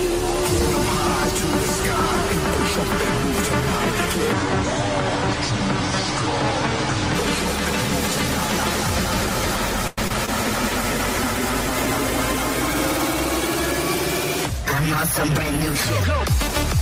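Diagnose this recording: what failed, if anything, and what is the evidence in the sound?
From 4.33 to 7.15 s the sound drops abruptly into a slower, deeper register, running at about 0.65 times normal speed and roughly seven semitones low, then snaps back. This is a section at the wrong speed, most likely resampled or played against the wrong clock somewhere in editing or playback.

At 9.87 s the sound stalls for about 0.1 s into a short fading continuation of itself, then resumes where it left off, so the rest arrives about 102 ms later. This call audio freeze points to the network stage: packets were likely held up and the jitter buffer emptied.

Brief smears at 10.08 s and 10.26 s, each around 20 ms long, blur the sound for an instant. This is short concealed packet loss in the network and decoder path: the receiver synthesised a stand-in from the preceding sound and blended back into the real audio.

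From 10.4 to 13.57 s the sound turns coarser and duller, worst for about 2.1 s. This is a call bitrate drop at the codec: the bandwidth estimate fell and the encoder's rate was halved from 32 to 16 kbps, reducing detail and top end.

From 16.13 to 16.79 s the sound hurries slightly, about 5% fast, with its pitch unchanged. This is a jitter buffer speed-up in call processing: the receiver trimmed small pitch-period slices, some 40 ms in total, to shrink the delay built up earlier.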